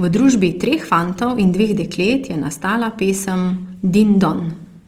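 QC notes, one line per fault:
Throughout: Opus compression, likely at a lowish bitrate around 24 kbps in CELT music mode, so the speech sounds plainly rough and grainy as starved bands get noise-filled.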